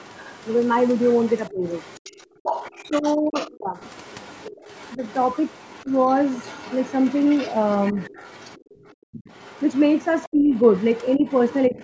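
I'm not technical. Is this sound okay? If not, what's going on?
No. Throughout the whole clip a second voice sits faintly underneath the main one, well below it in loudness. This is the other side's voice leaking through, most likely because the caller's loudspeaker played the other person and the echo canceller didn't fully remove it from the microphone.

The main voice also dips or partly cuts out at 1.5 to 1.65 seconds, 2.88 to 3.79 seconds, 4.96 to 5.0 seconds, 10.3 to 10.5 seconds and 11.17 to 11.78 seconds. This is speech suppressed in double talk. Both people were likely talking at once, so the canceller turned the talker down too. The longest and deepest dip is around 3 seconds.

Separately, at 2.25 to 2.43 seconds and 8.64 to 9.12 seconds, the quiet room sound between words drops out almost completely, then returns. This is background gated by the echo canceller. It differs from the dips above because the background disappears, not the voice, and the second gap is the deeper one.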